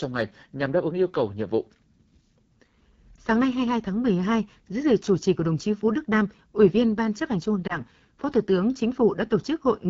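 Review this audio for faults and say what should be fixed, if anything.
The speech has a rough, raspy texture throughout, with plainly audible AMR wideband (HD Voice) codec damage. The model-based coding of the band up to 6.4 kHz breaks down at this low rate, which fits AMR-WB's 8.85 kbit/s mode. Unlike lost-frame damage, the roughness is constant rather than confined to moments. Carrying the call at 12.65 kbit/s or higher would prevent it.

Lost AMR speech frames show up as two brief dips or warbles, at 3.15–3.18 s and 7.67–7.80 s. Each sounds like a single concealed frame. The decoder repeats the previous pitch and vocal tract settings at reduced gain, and the voice returns weak or rough for a moment. These are isolated events, not the steady codec rasp. A cleaner radio link or stronger channel protection would prevent them.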